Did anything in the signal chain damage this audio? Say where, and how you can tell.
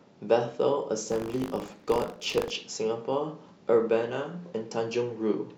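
Yes, at the driver or buffer stage: from 1.08 to 2.51 s the speech carries buffer tearing. The application writing the ring buffer and the hardware reading it have drifted until their positions cross within each period, so a small sliver of every buffer, a few percent, replays audio from roughly 40 ms earlier, with hard joins either side. The sound is a robotic 50 Hz buzz, which fits a 20 ms period, and it is heard only while speech is present.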